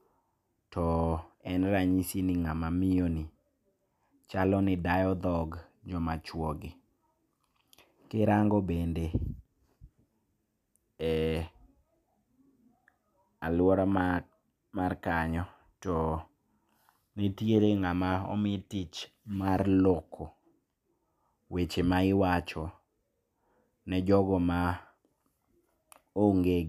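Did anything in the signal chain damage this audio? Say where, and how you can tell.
No, nothing in this speech recording stood out on listening as damage from any stage of the signal chain.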